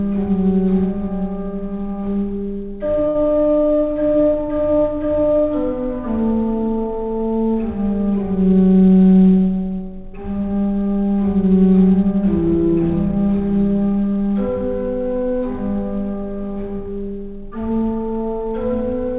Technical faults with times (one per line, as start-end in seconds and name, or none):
3.08-3.17 short stall from a late packet